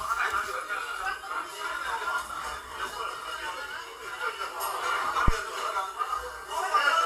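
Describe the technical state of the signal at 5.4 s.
The signal at 5.4 s is in the tail of a phantom power thump spanning 5.28 to 5.36 s. A supply switching on or off on the live input sends a voltage step through the coupling capacitors, producing a deep thump peaking at about -9 dBFS that dies away within about 19 ms. Unlike a cable knock's irregular rattle, it is one smooth low-frequency swing.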